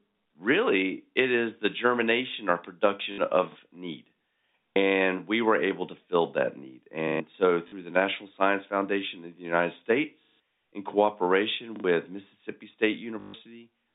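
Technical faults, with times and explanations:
3.12–3.18 s, 7.68–7.72 s and 13.20–13.34 s, packet loss with last packet repeated: a brief robotic stutter with a buzzy edge, first heard right after "is the germination or", and longest near the end at 140 ms. Packets went missing for 60, 40 and 140 ms, and the receiver kept replaying the last good one. The replays ignore the pitch cycle, and the repeat rate fits 20 ms packets, giving a 50 Hz buzz through the narrow telephone band.
3.52–3.56 s, 4.72–4.76 s, 7.08–7.20 s, 10.24–10.40 s and 11.76–11.84 s, repeated buffer: the same small slice of sound plays twice or more with a hard seam at each pass. The 4.72 s stutter falls just before "we were able to", and the 10.24 s one just before "in cooperation". The repeats point to a 40 ms buffer. New audio arrived late, so the device replayed the last block once, once, three, four and two extra times, losing roughly 40 to 150 ms of sound at each gap.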